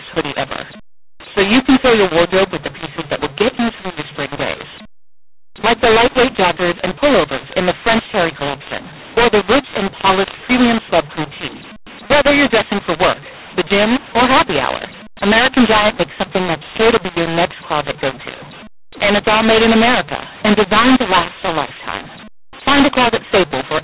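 From start to finish, the telephone audio was written with the mu-law form of G.711 but read back as A-law, so the two companding laws are mixed up. Because the logarithmic curves do not match, each 8-bit code maps to the wrong level. Some samples swell, others shrink, and the quietest are pushed well above silence. The speech sounds harsh and distorted, and the pauses fill with noise, all within the expected narrow band, below 4 kHz, of 8 kHz telephone audio.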